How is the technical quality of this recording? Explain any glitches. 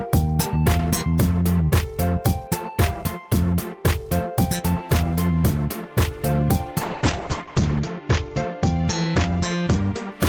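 Things hold up until about 6.83 s, when a call bitrate drop sets in and lasts to roughly 10.17 s. The connection's bandwidth estimate fell, so the encoder had to squeeze the audio into far fewer bits, which fits a fall from around 40 kbps to about 8 kbps. With so little to work with, the codec quantises coarsely and trims the top end, so the bandwidth shrinks from 20 kHz to 8 kHz. The sound goes muffled, rough and watery, worst for about a second at the lowest point.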